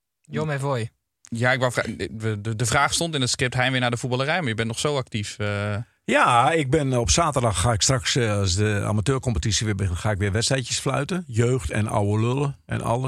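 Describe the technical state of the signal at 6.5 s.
At 6.5 s the speech signal is intact, with no dropout, clipping, distortion or other technical fault.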